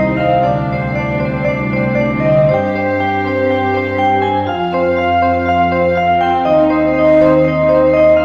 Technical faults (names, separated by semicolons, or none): imaging from linear upsampling